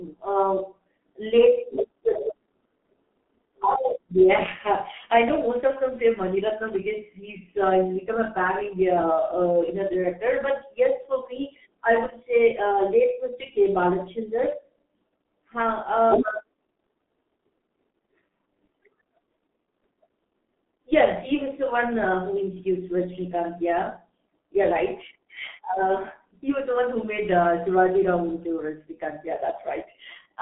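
Throughout, the speech has passed through a G.723.1 codec at a rate that fits about 6.3 kbit/s on a narrow telephone line. Nothing reaches above 3.7 kHz, so the speech sounds muffled and hoarse, with smeared, indistinct consonants.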